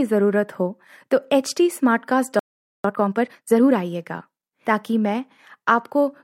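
A playback stall begins at 2.39 s: the speech stops in mid-flow and the output stays silent until 2.84 s, a gap of about 450 ms. The break comes suddenly rather than at a natural pause, so it reads as an interruption and not as a breath. The likely cause is that the player ran short of buffered data, or its audio thread was held up, and nothing reached the output until it recovered.

Time-compressed catch-up follows straight away, from 2.84 s to 3.72 s. Having fallen behind during the stall, the player trims its backlog by dropping small slices of audio and cross-fading across the joins. For that stretch the speech runs at 1.5 times normal speed, so it sounds hurried while keeping its usual pitch. The speech stays hurried until normal pacing returns at 3.72 s.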